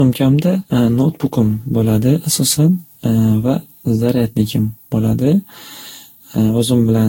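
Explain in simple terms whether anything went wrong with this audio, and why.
Generation loss runs through the whole clip, from start to finish. The speech sounds swirly, smeared and hollow, and the starts of sounds are blurred rather than crisp. Nothing is left above about 16.6 kHz, so the top sparkle is missing too. The likely cause is that the audio was squeezed with a lossy codec and re-squeezed around ten times. Each round throws away slightly different detail, and the small damages pile up into that watery, washed-out sound.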